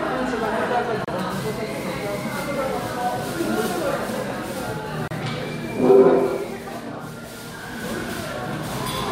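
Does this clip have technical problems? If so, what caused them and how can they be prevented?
Yes. There is a gap at a join of encoded pieces at 1.05 to 1.08 s (30 ms) and 5.08 to 5.11 s (32 ms), four seconds apart. Separately encoded pieces kept their start delay and end padding, so silence cuts in. Prevent it by trimming encoder delay and padding, or encoding the audio as one continuous stream.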